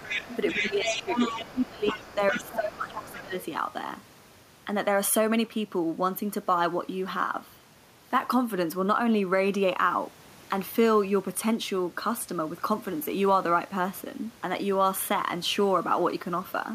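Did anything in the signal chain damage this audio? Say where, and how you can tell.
Yes. The damage is in call processing, where the echo canceller most likely failed to remove the far end's loudspeaker sound from the microphone, so the other side's voice leaks through. A second voice is audible from 0.0 to 1.69 s, only about 5 dB under the talker, then returns more faintly, around 10 dB down, from 1.87 to 2.56 s and 2.9 to 3.22 s. These are scraps of residual echo rather than a separate participant.

The same stage also produces speech suppressed in double talk. While both sides speak together, the canceller likely cannot separate the near talker from the echo, so it attenuates everything. The talker's level sinks by roughly 10 dB between 0.54 and 1.19 s, then more deeply, around 15 dB, across 1.37 to 3.34 s. About 0.5 s and 1.5 s of speech are affected in those two spans.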